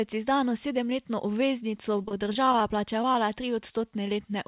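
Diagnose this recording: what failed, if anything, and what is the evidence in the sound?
The network stage failed, with repeated packet loss producing a robotic sound from 1.97 to 2.74 s. The audio turns choppy and robotic across that stretch. About a dozen short holes follow one another, none longer than 22 ms. The decoder patches each one by extending the last sound, so roughly a fifth of the span is substitute audio. The concealment keeps restarting before real audio settles, which gives the mechanical texture.

Two more brief dropouts sit at 3.02 to 3.04 s and 3.13 to 3.16 s. These are short concealed packet loss, again a network fault. Each removes about 10 ms of real audio. The receiver bridges it by continuing the preceding sound and then blends back in. What you hear is a quick smear or wobble. The call path itself runs narrowband, with nothing above 4 kHz, which fits G.711 coding.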